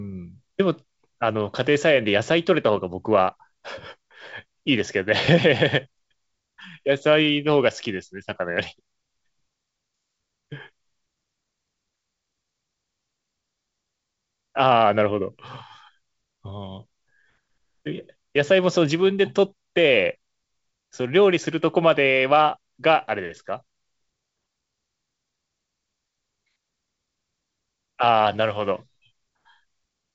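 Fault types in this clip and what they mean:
There are no fault types in this clip; the speech comes through G.722 wideband telephone coding at 64 kbit/s, with nothing above about 7.7 kHz.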